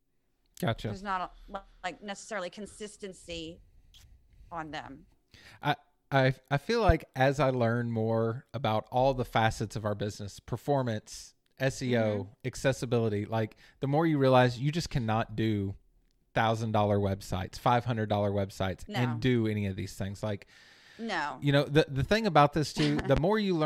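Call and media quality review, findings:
Loud pop, 6.89–6.92 s, between "I I I feel" and "as I learn more": a single sharp crack about 20 dB over the speech, which carries on underneath. Loud pop, 22.99–23.20 s, after "the the thing about": a double thump, about 15 dB up. Likely cause: a sudden voltage step from a connector, switch, static discharge or driver glitch entering the signal path, with later circuitry shaping it into a pulse.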